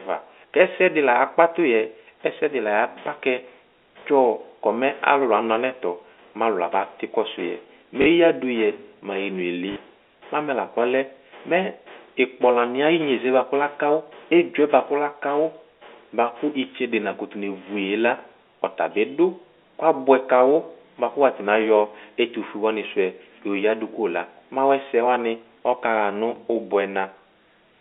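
At 4.00 s, 8.02 to 8.06 s, 9.72 to 9.76 s and 26.36 s there is packet loss with the last packet repeated. Packets went missing and the receiver replayed the previous one to fill each gap, about 20 ms at 4.00 and 26.36 s and 40 ms at the other two, which fits one and two 20 ms packets. The 40 ms gaps give a brief robotic stutter through the narrow telephone band.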